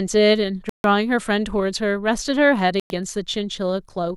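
At 0.69 s the speech drops to silence for about 150 ms, then resumes; at 2.80 s a second gap of about 100 ms follows. Both are a likely Bluetooth stall: interference delayed packets, the headphones' buffer emptied, and playback halted until retransmissions arrived.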